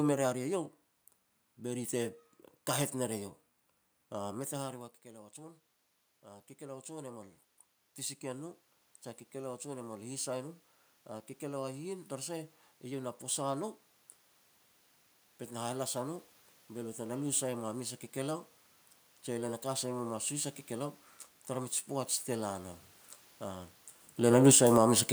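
A speech clip with a regular click from about 2.16 s to 25.09 s. It repeats every 2.08 s, roughly ten times. These are clock drift buffer slips. The likely cause is two devices running on separate clocks about 70 ppm apart, so a few samples get dropped or repeated at each slip. Near the end, automatic gain falling pulls the level down by about 6 dB between 24.19 s and 24.76 s. The control judged the input too loud, or its background noise too strong, and lowered its gain. The room background sinks along with the speech.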